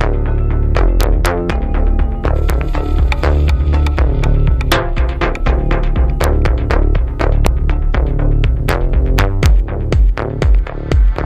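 Integer overflow cracks the sound at 1.01–1.26 s, 2.50, 4.72, 6.24, 7.46, 8.69 and 9.19–9.46 s; overloaded peaks wrap to the opposite sign rather than flattening, sounding sharper than clipping.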